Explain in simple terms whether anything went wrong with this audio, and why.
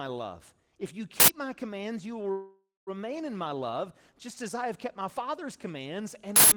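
Two problems. An uninitialised buffer plays leftover memory as loud digital noise, in sudden bursts unlike any sound in the speech: 1.2 to 1.28 s, just before "my commands you will", and 6.36 to 6.52 s. From 2.31 to 2.90 s, after "my commands you will", a call audio freeze holds the last sound as a fading buzz with a brief silence, likely from delayed network packets. The speech then resumes at "in my love just" with nothing lost.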